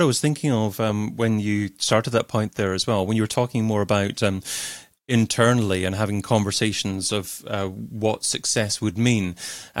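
A speech recording with no audible technical faults.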